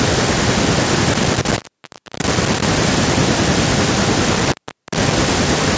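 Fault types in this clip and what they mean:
Intermittent contact: a loose plug or cable connection briefly breaks, so the speech cuts out for about 0.64 s between 1.14 and 2.62 s and about 0.44 s between 4.33 and 5.13 s. Crackle marks each break and faint hiss remains, unlike a codec dropout's clean, silent gap.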